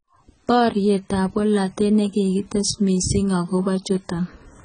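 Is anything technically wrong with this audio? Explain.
Yes. The whole speech clip carries heavy AAC compression damage. Nothing sounds above 9.2 kHz, so the top of the spectrum is simply gone and the voice sounds dull. Sibilants turn fizzy and smeared. Sustained sounds pick up a warble. The likely cause is AAC-LC coding at a very low bitrate, one that fits about 16 kbps. The encoder lowers its cut-off to save bits. It then quantises the remaining bands so coarsely that holes and noisy fill appear.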